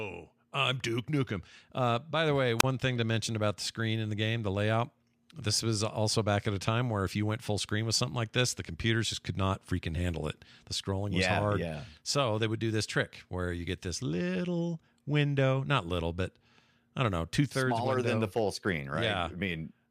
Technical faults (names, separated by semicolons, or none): wireless microphone squelch dropout